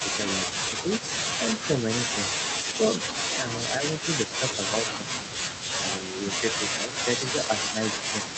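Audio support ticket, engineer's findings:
Echo leak: likely residual loudspeaker echo passing the far-end canceller. Delayed copy of the speech about 10 dB down, 298 ms behind, 0.00–1.91 s and 2.45 s to end.

Speech suppressed in double talk: likely canceller turning down its own talker along with the loudspeaker echo during overlap. Near talker dips about 5 dB in pieces at 0.04–0.57, 3.37–5.35, 6.13–6.18 and 6.86–8.25 s.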